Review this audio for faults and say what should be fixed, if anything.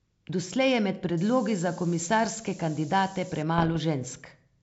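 From 1.18 to 3.43 s the speech was requantised to low bit depth with noise shaping, about 5 bits, and the rounding error was pushed up in frequency. The result is a steady, thin hiss rising toward the top of the band, with noise nearly as loud as the speech itself. Keeping the signal at full word length through this stage, or dithering only at the final output, would prevent it.

From 3.58 to 3.77 s the link suffered bit errors on an ADPCM link, at a rate that points to around one percent and across 9 frames. Each flipped bit knocks the decoder's step size and predictor off track, so the damage rings on as pops and rough bursts with brief level jumps. Error protection or concealment on the transmission path would prevent it.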